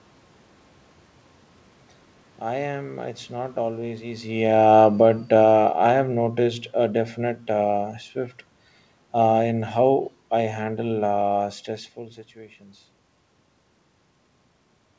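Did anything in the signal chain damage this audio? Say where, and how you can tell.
Yes: automatic gain falling in call processing after "not always". From 4.32 to 7.95 s, the waveform envelope and the background noise sink together by about 7 dB as the AGC backs off.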